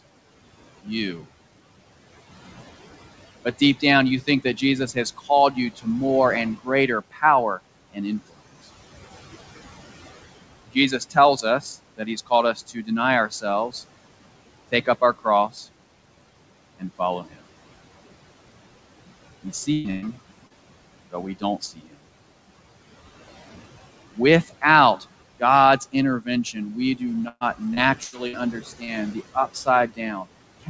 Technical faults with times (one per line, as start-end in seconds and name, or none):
0.00-30.70 noise suppressor artifacts
3.45-8.37 speech cut by the noise suppressor
10.67-13.74 speech cut by the noise suppressor
14.72-15.57 speech cut by the noise suppressor
16.80-17.44 speech cut by the noise suppressor
19.73-20.05 burst of packet loss
20.47-20.53 short concealed packet loss
21.11-21.93 speech cut by the noise suppressor
24.16-30.70 speech cut by the noise suppressor
27.28-28.36 repeated packet loss (robotic sound)
28.84-28.90 short concealed packet loss